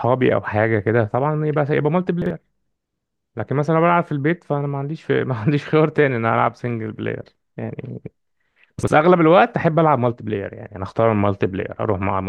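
At 2.22 s and again at 8.79 s, the speech jumbles briefly. These are chunks out of order: one 43 ms chunk plays a chunk late, creating hard joins.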